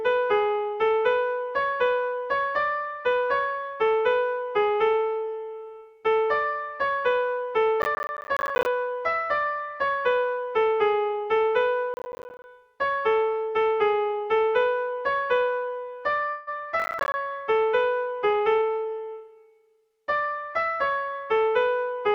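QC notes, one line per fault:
7.82–8.66 s, 11.94–12.44 s and 16.80–17.14 s, processor overload crackle: three bursts of gritty tearing, the first the longest. Buffers of about 10 ms were missed many times in a row, a few dozen in the first burst and fewer in the later two, and each missed buffer became a short silent hole with hard edges. On the waveform these show as rows of flat dropouts with sheer sides. On a spectrogram they appear as thin vertical broadband stripes packed across each span.
16.29–16.49 s, call audio freeze: for about 176 ms the sound stops moving on and is held as a fading buzzy continuation of what came just before, with no silent stretch. Playback then resumes exactly where it stopped, so nothing is lost but everything after arrives about 176 ms late. This is likely a jitter buffer that ran empty while packets were held up in transit. A spectrogram shows smeared, stretched harmonics that fade out. 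The waveform shows a repeating, decaying cycle.
18.33–20.35 s, jitter buffer speed-up: over these two seconds the audio runs at about 109% speed while its pitch stays the same, so it sounds hurried. Around a fifth of a second was cut out as many tiny pitch-period slices to drain surplus buffered delay, probably the lag left by the freeze just before. On a spectrogram, events crowd closer together while harmonic spacing is unchanged. The waveform shows a compressed envelope with splice joins.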